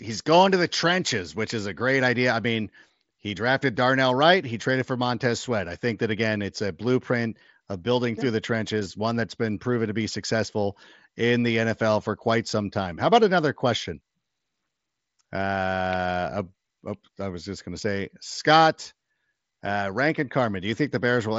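Nothing stood out on listening to this speech clip, which comes over a Bluetooth mSBC headset link with its usual ceiling of about 7.7 kHz.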